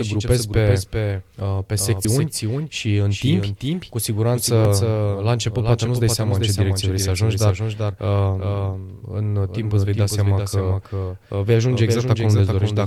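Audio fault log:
throughout, doubled audio track: every stretch of speech is shadowed by a second full-band copy roughly 0.4 s behind and about 5 dB quieter, with no reverb tail or room colour. The same signal is likely being mixed in twice, once through a slower path.
2.05 s and 4.65 s, dropped buffer (overrun): the speech lurches forward with no silent gap. The second falls between "în timp cu siguranță" and "la început poate". About a tenth of a second vanishes each time, likely overwritten before the program read it.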